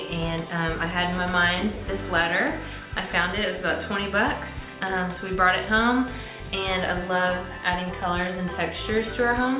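Nothing in the audio stood out as a technical problem on listening.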